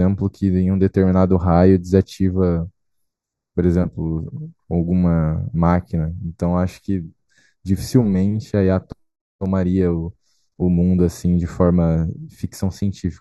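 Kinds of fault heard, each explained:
Channel delay (comb filtering): One channel arrives late by a tiny fraction of a millisecond, and the two are mixed to mono. Sound common to both channels then cancels at evenly spaced frequencies. Here the first notch falls around 3 kHz, with further notches higher up at regular intervals. The speech sounds hollow and phasey, with dulled presence and sibilance. The effect is fixed and lasts the whole clip.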